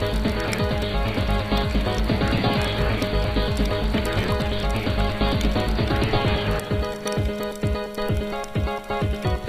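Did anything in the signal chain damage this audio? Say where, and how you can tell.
No, nothing in the signal chain audibly damaged this audio.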